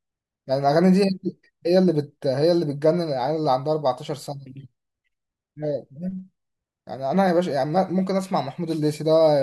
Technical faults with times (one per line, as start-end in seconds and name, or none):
none